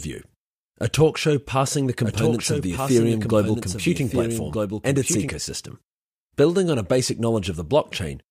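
A second, slower capture path likely fed the same speech into the mix again, producing a doubled audio track from 2.03 s to 5.29 s. A full-band copy trails about one and a half seconds behind, roughly 5 dB quieter, dry and without room colour, switching in and out abruptly.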